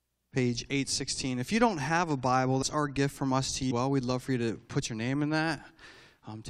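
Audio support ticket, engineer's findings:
Compressed frames skipped in the speech at 2.61–2.63 s and 3.70 s. Audio jumps ahead roughly 150 ms, then 300 ms, which points to around 7 and 15 lost 21.3 ms decoder frames. Spectrogram/waveform: abrupt content discontinuity with no gap.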